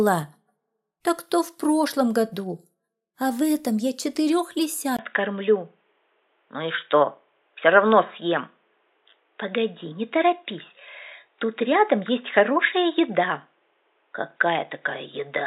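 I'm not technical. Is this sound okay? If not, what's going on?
No. At 4.97 s the recording likely switched to a poorer input device, a weaker microphone. After a brief gap the sound turns dull and muffled, losing everything above 3.8 kHz.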